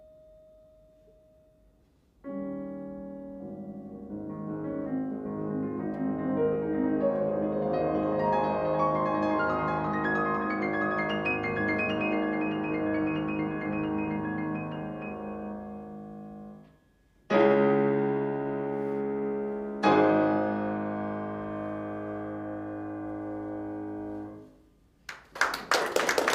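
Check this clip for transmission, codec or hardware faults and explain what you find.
No faults found anywhere in the clip.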